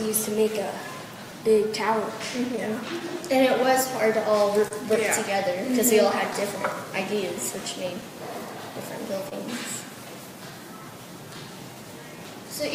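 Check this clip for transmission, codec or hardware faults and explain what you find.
Four related transmission faults are present, all tied to timing and packet delivery between sender and receiver rather than to the codec or hardware.

Clock drift between sender and receiver runs through the whole clip. The sender's audio clock runs roughly 2% slower than the receiver's, so fewer samples arrive than the receiver plays out. Its jitter buffer keeps draining, and the receiver has to keep compensating. Across the clip this gives a faintly uneven pace, with small timing hiccups recurring at irregular intervals instead of one clean glitch.

Repeated timing corrections are the receiver's response to that drift, from 0.44 s to 12.62 s. To keep from running dry, it repeatedly stretches short pieces, always lengthening and never cutting, so playback runs at about 99% speed and gains something like 150 ms over the stretch. 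The edits are small and unevenly spaced. They come through as a slightly unsteady tempo and occasional tiny stutters.

Scattered short gaps occur between 2.57 s and 4.73 s. About five packets were lost or arrived late, spread across this stretch. The receiver covered each hole by continuing the last sound, concealing roughly 70 ms in total, with the longest patch around 30 ms. Nothing is actually missing, and the audio stays mostly clear. Each patch shows up as a brief tick, smear or hiccup.

A short stall from a late packet falls at 9.29–9.34 s. One packet had not arrived when it was due, and the already-thin buffer ran empty. The receiver held the last sound for 27 ms until the packet came in, then resumed where it left off. This pushed the delay back by the same 27 ms. Nothing is lost, but one sound hangs on a moment too long, with a slight buzz or dip.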